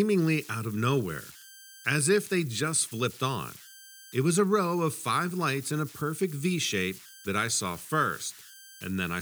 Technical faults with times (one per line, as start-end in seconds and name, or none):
0.00-9.21 converter idle tones